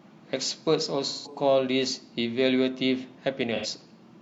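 At 1.08 s the speech turns briefly smeared and phasey until 1.36 s, and a shorter patch of the same kind follows from 3.55 to 3.66 s. Both are AAC frame loss with concealment: encoded frames went missing, roughly 171 ms and 85 ms of audio, which fits about four and two lost frames. The decoder then rebuilt each gap from the last good spectrum, so nothing in them comes from the real signal.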